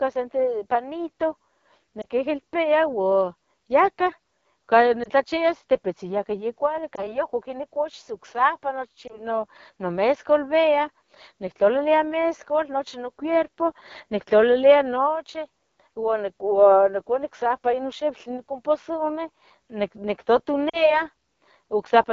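AMR wideband (HD Voice) codec damage runs throughout: the roughness and rasp point to one of its lowest modes, around 8.85 kbit/s, with shaped noise filling the top band. Lost AMR speech frames at 2.02–2.06, 5.03–5.08, 6.95–7.18, 9.07–9.20 and 20.69–21.02 s each leave a brief dip or warble as the decoder repeats fading settings. The last is longer, fitting two lost 20 ms frames.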